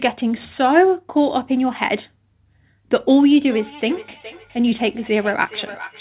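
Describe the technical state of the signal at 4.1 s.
Thin repeats of the speech return about every 0.4 s, about 19 dB down: feedback echo between two devices, 3.44 s to the end, each replaying the other's microphone.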